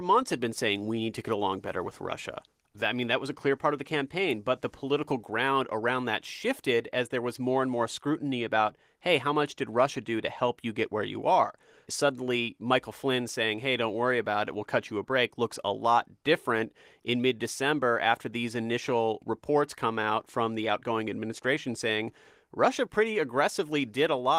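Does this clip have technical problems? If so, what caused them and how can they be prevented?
No, no technical faults here.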